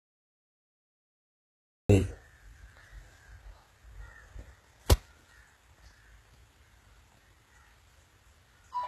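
Cut-off start at 1.90 s: this speech clip is digital silence until the recording abruptly begins mid-sound, with no natural attack or fade-in. The capture or stream evidently started late, so whatever preceded that instant is simply missing. HE-AAC compression runs throughout, with plainly audible damage and nothing above 12.3 kHz. The treble sounds synthesized rather than captured, likely from spectral band replication copying lower bands upward at a low bitrate, plausibly around 16 kbps, which leaves sibilants gritty and metallic.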